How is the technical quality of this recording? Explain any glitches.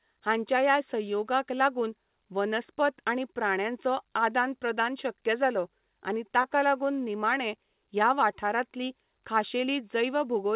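The recording carries one audible glitch, a short concealed packet loss in the speech. It has passed through a call codec whose sound points to G.711 A-law, and nothing is heard above 4 kHz.

Between 6.42 and 6.46 s, after "प्रदान शक्य जालो आनी" and before "लागून निमाणें ह्या वाठारांतलीं", some audio arrived too late for the decoder. About 20 ms was missing. The receiver extended the preceding sound to cover the gap, spending about 17 ms on that fill. It then blended back into the real signal. The result is a brief smear or wobble at that point.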